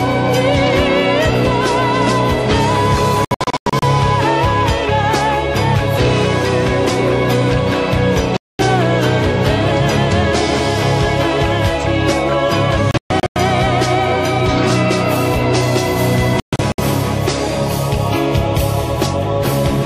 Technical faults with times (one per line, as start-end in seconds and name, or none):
3.25-3.83 digital broadcast dropout
8.37-8.59 digital broadcast dropout
12.91-13.36 digital broadcast dropout
16.40-16.79 digital broadcast dropout